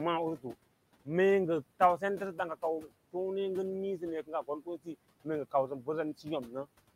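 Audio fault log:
throughout: noise suppressor artifacts. The suppressor pulls bands it judges steady noise down by about 18 dB frame by frame, so the room noise, about 18 dB under the speech, dips between words and returns beneath them.
4.26–4.88 s, 5.51–5.88 s, 6.47–6.66 s: speech cut by the noise suppressor. Parts of the speech were taken for noise and turned down with it, by up to about 17, 11 and 7 dB respectively over roughly 0.2, 0.1 and 0.1 s, so those parts sound swallowed.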